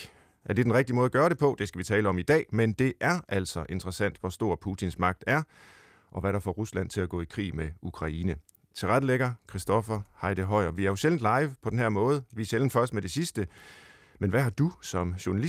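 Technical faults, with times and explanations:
No technical faults are audible.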